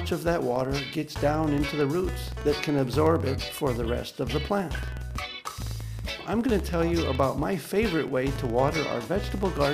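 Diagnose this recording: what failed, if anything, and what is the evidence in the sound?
A filter restarted on every block fails in the processing stage: a steady 21.5 Hz buzz of small ticks runs through the whole clip, which fits a 2048-sample block. Each block starts the filter from silence. Unlike mains hum, the buzz rises and falls with the signal's level.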